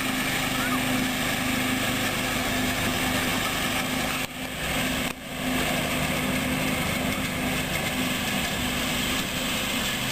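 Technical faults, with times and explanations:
2.41–3.37 s, processor overload crackle: for nearly a second the processor falls behind and misses deadline after deadline on buffers that sound to be around 5 ms long, dozens of them. Each missed slot replays a scrap of stale audio with hard edges, so the sound turns gritty and torn until the load eases. On a waveform this shows as abrupt steps and discontinuities; a spectrogram shows dense vertical broadband streaks across the whole span.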